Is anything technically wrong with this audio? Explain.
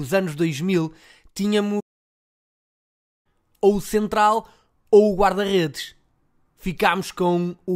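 Yes, there is a playback stall from 1.80 to 3.26 s. The player most likely ran short of data or had its output thread held up, so nothing reached the output for about 1.45 s until it recovered. In the sound, the speech cuts off mid-flow into a clear gap of silence, then resumes with "ou o central ou", which makes the break sound like a sudden halt rather than a natural pause.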